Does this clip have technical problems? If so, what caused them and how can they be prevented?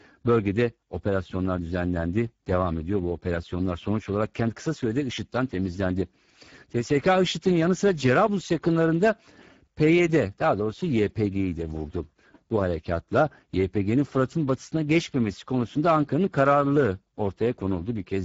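Yes. Speex codec damage is plainly audible for the whole clip. The speech sounds noisy and hoarse. This CELP codec models the voice and spends very few bits on the excitation signal that drives that model, so the fine texture of the speech is lost. The level of damage points to a low bitrate of around 10 kbps. Nothing is present above 7.7 kHz. To prevent this, encode at a higher Speex quality setting or use a modern codec such as Opus.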